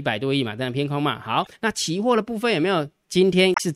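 At 1.43 s the speech breaks up briefly for about 40 ms, to 1.47 s. This is damaged data in a compressed stream. Some bytes in that stretch are wrong. The decoder cannot read those frames properly and loses sync until it finds a valid frame header again. A second burst of damaged data runs from 3.52 to 3.60 s, about 80 ms. It is heard as a short glitch near the end.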